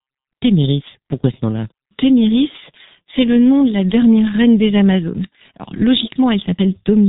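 From start to finish, the speech carries heavy G.723.1 codec damage. Nothing passes above about 3.8 kHz, so the top of the sound is simply gone and everything is muffled. The codec works in long 30 ms frames and rebuilds the voice from a model that updates slowly. That leaves a hoarse, buzzy texture and smears consonants together. The thinness points to a very low bitrate, around 6.3 kbit/s.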